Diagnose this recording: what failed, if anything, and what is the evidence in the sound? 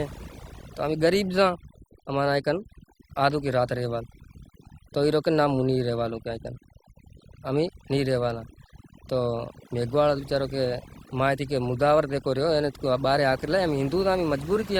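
Call-processing noise suppression was set too aggressively, producing overdone noise removal throughout: bands near the noise floor are gated away, leaving twinkling specks in near-silence and quiet parts of the voice gone with them.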